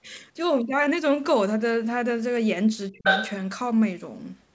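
From 2.89 to 3.05 s the speech sinks sharply, by around 25 dB at its deepest, over roughly 150 ms in all. This is speech suppressed in double talk, likely from the echo canceller turning down both voices when both sides spoke at once. It is a ducking of level, not the hard silence of a dropped packet.

From 3.04 to 3.33 s a second voice is the other side's voice leaking through, about 5 dB louder than the talker's own speech. The talker's loudspeaker likely fed it back into the microphone without full cancellation.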